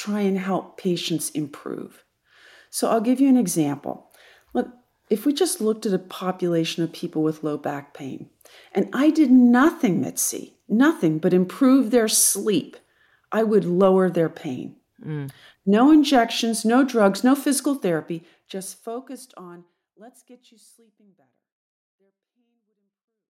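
No faults in this speech; the level eases out smoothly from around 18 s to the end, as an editor's fade would, with no click or hard edge.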